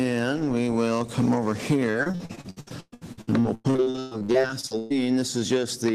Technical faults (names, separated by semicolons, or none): repeated packet loss (robotic sound)